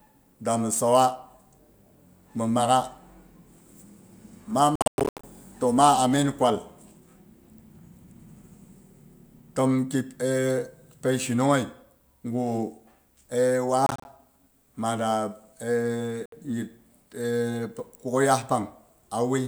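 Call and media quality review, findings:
Speech cuts to silence at 4.76–5.24 s (gaps totalling 360 ms, longest 107 ms), 13.86–14.05 s and 16.26–16.32 s. Hard-edged holes; speech resumes skipped ahead. Likely Bluetooth dropout: late packets discarded.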